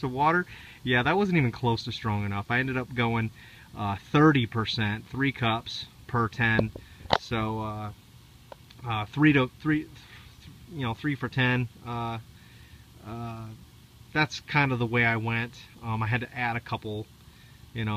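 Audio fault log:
No faults detected in this audio.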